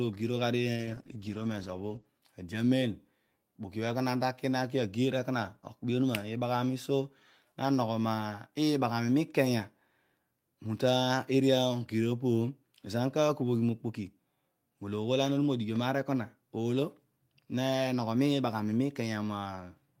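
From 0.75 s to 2.13 s the speech goes through a call bitrate drop: the connection's bandwidth estimate fell, so the encoder had to spend far fewer bits, coding more coarsely and narrowing its band. For about 1.3 s the speech turns rough and muffled, which fits a fall from roughly 32 kbps to 12 kbps. On a spectrogram the energy above 8 kHz vanishes abruptly, down from a band reaching 20 kHz, then returns at 2.13 s.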